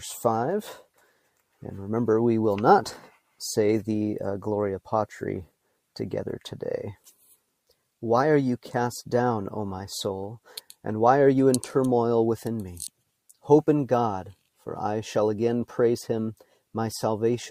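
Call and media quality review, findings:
Sound cut by the noise suppressor, 0.83–1.41 s and 6.96–7.35 s: suppressor misread content as noise, pulling it down by about 12 dB and about 9 dB respectively, for a few hundred ms each.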